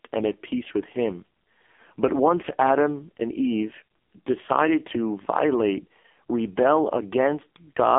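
From start to finish the speech sounds thin, boxed-in and buzzy, with a synthetic, smeared edge and nothing above about 3.5 kHz or below about 250 Hz. This is the AMR narrowband mobile codec, and the heavy damage points to one of its lowest modes, around 5 kbps.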